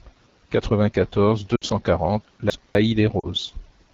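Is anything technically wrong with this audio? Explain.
Yes, there are three kinds of fault.

The whole clip carries AMR wideband (HD Voice) codec damage. The speech sounds rough and raspy, which points to one of the lowest AMR-WB rates, around 8.85 kbit/s. A spectrogram shows detailed energy only up to 6.4 kHz, with a smeared noise band filling 6.4 to 7 kHz and nothing above.

Lost AMR speech frames occur at 1.56 to 1.64 s, about 60 ms, and at 3.20 to 3.26 s, about 40 ms, which fits three and two lost frames. The decoder repeats the last pitch and vocal tract settings at falling gain, so the sound drops to near silence within two frames. The waveform shows a shrinking envelope with a weak restart.

Chunks out of order affect 2.25 to 2.75 s. A 250 ms chunk plays one chunk late, after the audio that should follow it, so this moment sounds jumbled, with three hard joins. These joins appear as vertical broadband lines and waveform discontinuities.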